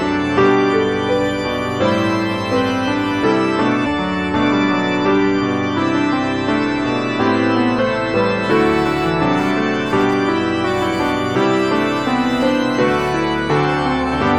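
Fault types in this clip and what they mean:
Damaged data in a compressed stream: corrupted frames make the decoder lose sync, giving brief glitches near 3.82 and 7.74 s, visible as short broadband smears with waveform discontinuities.
Computer activity noise: computer load changes disturb the shared ground, adding a whine around 1 kHz, about 25 dB below the signal, from 8.4 to 13.6 s, seen as a spectrogram line that rises and falls with computer activity.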